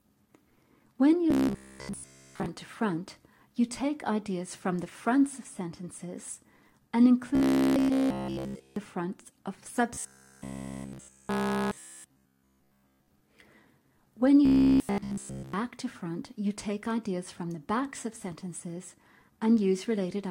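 A rigid, metallic buzz at 66.7 Hz takes over the audio from 1.31 to 2.46 s, 7.35 to 8.79 s, 9.94 to 13.08 s and 14.46 to 15.53 s, following the original sound only roughly. This is robotic sound from repeated short buffers, likely caused by new audio arriving too seldom, so the playback fills each gap by looping the last 15 ms chunk while essentially all of the real audio in those spans is skipped. The repeat rate becomes the buzz. Throughout the clip there is also a fine hiss or roughness that grows on louder and brighter passages and disappears in silence. That is sample clock jitter: an unstable converter clock of around a microsecond takes each sample a little early or late, and the resulting error, about 45 dB below the signal, scales with how steeply the waveform is changing.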